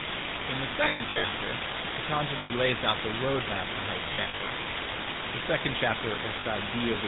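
Speech clip carrying three problems. Throughout, the full-rate GSM codec gives the voice a plainly audible buzzy, gravelly roughness with nothing above 4 kHz. That points to the 13 kbps pulse-excited vocal-tract model, which rebuilds the voice from a sparse, regularly spaced excitation. Low bit depth with dither adds a constant, even hiss with no distortion. It sits about 5 dB above the signal, which fits roughly a 3-bit quantiser where dither turns the rounding error into steady white noise. Lost GSM frames leave rough, metallic, held rings where the decoder repeats the last good frame at falling level. Scattered losses run from 0.84 to 1.33 s, with the longest stretch around a tenth of a second, and from 4.14 to 4.51 s, just after "roadmap for how to", with runs of up to about 70 ms. Shorter gaps fall at 2.38 to 2.51 s, just before "lays out the roadmap", and at 6.40 to 6.45 s.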